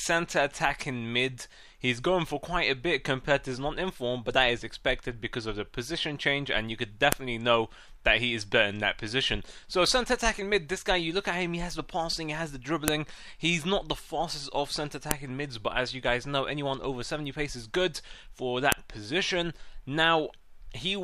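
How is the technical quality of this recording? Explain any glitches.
The recording is marred by four sharp, loud clicks at 7.12, 12.88, 15.11 and 18.72 seconds, snapping through regardless of what the sound is doing. This is a file header played as audio: pieces were joined with their WAV headers intact, so those header bytes play back as samples.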